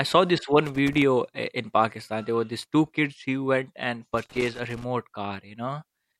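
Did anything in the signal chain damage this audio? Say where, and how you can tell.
Yes. Irregular bursts of crackle and scratching break up the speech from 0.66 to 1.02 s, right after "saw this", and again from 4.17 to 4.84 s, after "kids who went and". This is loose connector crackle in the analogue wiring: a worn contact rapidly making and breaking, chopping the signal.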